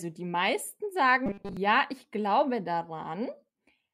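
From 1.26 s to 1.57 s the speech turns into robotic sound from repeated short buffers. It becomes a rigid, metallic buzz pitched at 200 Hz, though the rough shape of the words still comes through. The cause is likely audio arriving too seldom. The gaps seem filled by looping the last 5 ms, which fits that fixed pitch. Most of that stretch is repeated material, so the real audio underneath is skipped.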